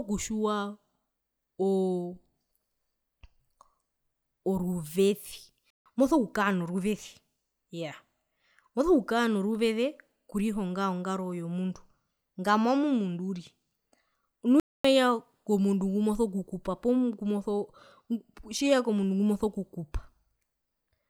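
Speech with two playback stalls, silent gaps at 5.70–5.86 s before "moso kukaa" and at 14.60–14.85 s, likely from the player running out of data. Each time the sound stops in mid-flow for a noticeable moment.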